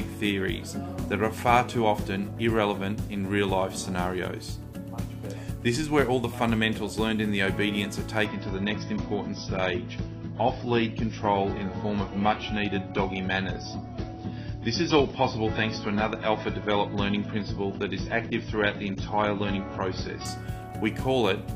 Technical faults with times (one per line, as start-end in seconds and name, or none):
8.25-20.25 adaptive stream at a lower bitrate